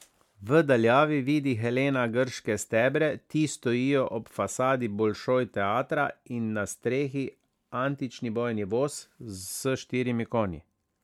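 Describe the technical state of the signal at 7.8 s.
At 7.8 s the speech sounds swirly and hollow, with a smeared, watery texture and softened consonant attacks, and this colouring runs through the whole clip rather than starting there. The likely cause is generation loss: the audio appears to have been decoded and re-encoded with MP3 about seven times, at a quality that fits around 128 kbit/s. Each pass requantises on a shifted frame grid, so noise and spectral gaps pile up beyond what that bitrate would leave alone.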